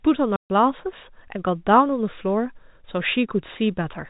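From 0.36 to 0.50 s the speech drops into 140 ms of dead silence, with hard edges. This is packet loss filled with silence: a run of lost packets, fitting seven 20 ms packets, was replaced with silence inside the G.711 telephone band.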